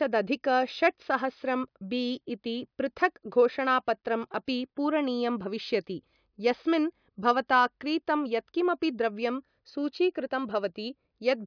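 Nothing in the speech stood out as a technical problem on listening.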